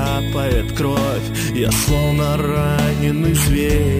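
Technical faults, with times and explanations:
Throughout, imaging from sample-and-hold upsampling: there's a bright, metallic fizz riding on everything, rising and falling with the sound's level. It points to audio at about 22 kHz being raised to 44.1 kHz by simply repeating each sample with no smoothing filter, so a mirrored copy of the spectrum lands between roughly 11 kHz and 22.05 kHz, sitting about 18 dB below the wanted sound, and that lowest copy slides opposite to any pitch movement.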